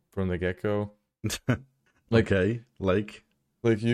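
No technical faults occur at any point, so there is nothing to describe in time order.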